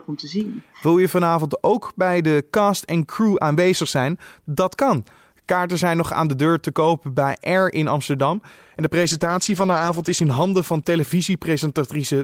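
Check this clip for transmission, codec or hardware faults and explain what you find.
One transmission fault is audible in this speech clip.

Call bitrate drop, from 9.02 s to 12.23 s: the call's bandwidth estimate fell, so the encoder coded the speech far more coarsely and trimmed its highs. The audio turns rough, watery and muffled, which fits a fall from 48 to 12 kbps, with the worst stretch lasting about 1.1 s.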